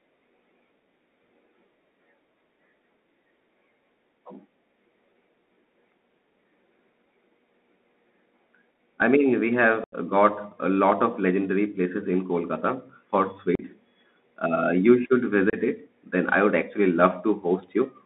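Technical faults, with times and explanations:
Throughout, Bluetooth CVSD headset codec: the speech sits in a narrow 200 Hz to 3.7 kHz band, which fits a 64 kbps CVSD link. One-bit delta coding can't keep up with loud, bright sounds, so the s sounds get scratchy and a grainy hiss rides underneath.
9.84–9.94 s, 13.55–13.63 s and 15.50–15.55 s, unconcealed Bluetooth headset packet loss: short abrupt holes (about 82, 38 and 30 ms of lost audio) where dropped headset packets were filled with nothing. The first comes right after "I mean we", and the speech resumes with hard edges.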